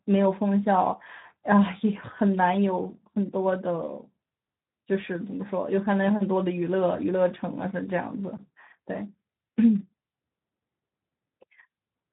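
From start to finish the speech carries Speex codec damage, plainly audible as a hoarse, noisy sound, which fits a bitrate around 11 kbps. Nothing sounds above 3.8 kHz. Unlike a plain low-pass filter, the voice itself sounds roughened.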